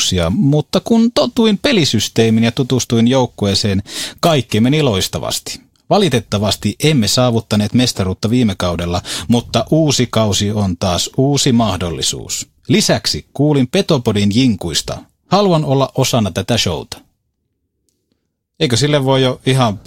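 No technical faults can be heard anywhere in the speech. Nothing in the recording calls for a timestamp or a fix.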